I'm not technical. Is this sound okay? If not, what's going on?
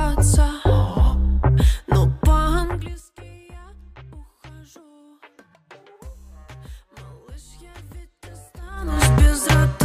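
No. This has zipper noise. From 2.56 to 3.06 s the volume drops in small jumps, not smoothly. From 8.6 to 9.02 s it rises the same way. Each jump clicks, about fifteen to twenty times a second, so you hear a ticking buzz.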